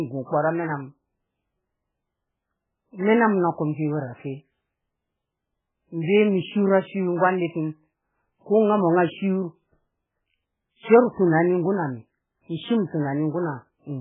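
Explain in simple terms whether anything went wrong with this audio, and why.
Heavy MP3 compression is the likely cause of the dull, watery quality that runs through the whole speech clip. Nothing can be heard above about 3.8 kHz, so the crisp top end of the voice is gone and s sounds lose their bite. When an encoder is starved of data like this, it throws away the treble entirely and drops quieter detail that flickers in and out from moment to moment. That flickering is what gives the sound its swirly, metallic texture.

Pre-echo occurs twice: once at 11.14 to 11.17 s, just after "shiyo rru", lasting about 36 ms, and again at 12.87 to 12.92 s, lasting about 55 ms. In both spots a brief smear of hiss arrives just ahead of a sharp sound, softening its attack. The compression handles audio in short blocks and spreads its noise across each whole block. So noise meant to hide under the loud onset also spills into the quiet instant before it, where it can be heard.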